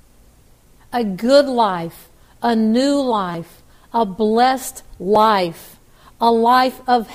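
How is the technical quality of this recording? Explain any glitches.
Two short repeated-buffer glitches break the recording. At 3.32 to 3.34 s a brief buzz is heard: one piece of about 5.8 ms plays four extra times with a hard join at each repeat. New audio arrived late, so the device replayed its last buffer, which fits a 256-sample buffer, and roughly 20 ms is lost. At 5.16 s a single extra play gives a click, dropping about 5 ms.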